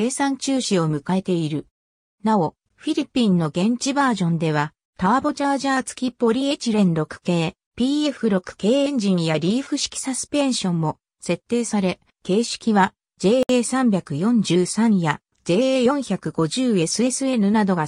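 Two separately encoded pieces of the audio have been joined at 13.43 s without removing the encoder's leading delay and trailing frame padding, leaving a gap at a join of encoded pieces. Both chunks of padding survive, so a silence of about 64 ms opens in otherwise continuous sound, running to 13.49 s. Its edges are smeared by the codec, so the truly silent part is somewhat shorter, and the sound then resumes exactly where it broke off.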